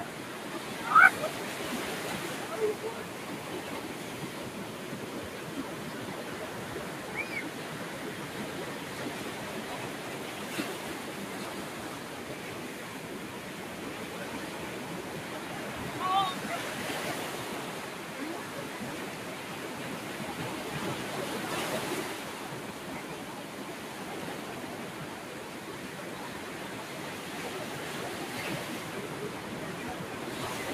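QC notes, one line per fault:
Nothing stood out on listening to the sound, and there is nothing to flag.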